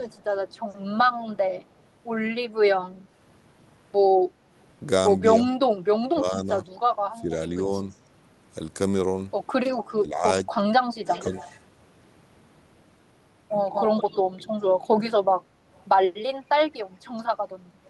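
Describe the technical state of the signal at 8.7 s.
At 8.7 s the speech signal is intact, with no fault audible at that moment.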